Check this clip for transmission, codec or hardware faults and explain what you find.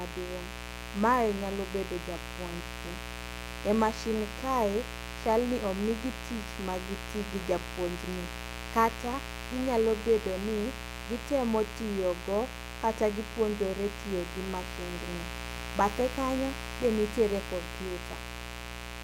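There's one hardware fault here: mains buzz across the whole speech clip, 60 Hz based, with switching spikes pumping in harmonics up into the kilohertz, so it's a raspy buzz sitting only about 10 dB below the voice.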